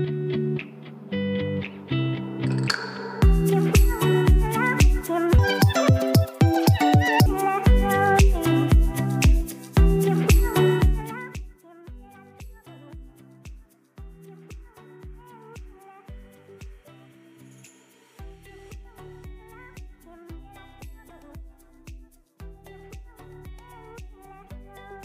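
From 5.39 to 7.26 s, a section at the wrong speed runs twice as fast, pitch jumping nearly an octave with tempo, unlike pitch shifting; a clock mismatch is the likely cause.

From 10.79 to 11.58 s, zipper noise: the level drops roughly 25 dB in unsmoothed steps, about 70 per second, leaving a fine ticking that a smooth fade lacks.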